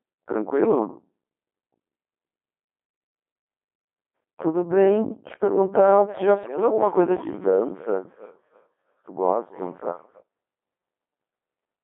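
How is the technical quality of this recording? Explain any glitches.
The technical quality is poor: the whole recording passes through a very low-rate vocoder, and two brief bursts of data corruption break it further.

Codec 2 vocoder, throughout: the speech is not carried as a waveform but rebuilt from pitch, voicing, energy and a spectral envelope, at a rate that suggests Codec 2 around 2.4 kbit/s. The result is heavily buzzy and robotic, confined to roughly 200 Hz to 3.5 kHz.

Bit errors on digital voice radio, at 0.62–0.72 s and 6.44–6.58 s: corrupted bits, likely a few percent near the edge of coverage, reach the decoder and scramble its frame parameters. Pitch, level and timbre jump abruptly into warbling, bleeping gibberish. The second burst is longer and more damaging.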